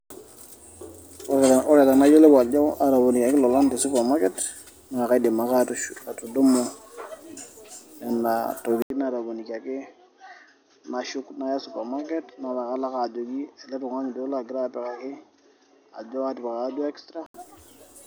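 Speech that, after a brief 80 ms gap at 8.82 s, turns duller and boxier, loses everything above 6.4 kHz, drops about 10 dB in level and gains a faint new background noise until 17.34 s. The input was likely switched to a poorer device with a narrower band.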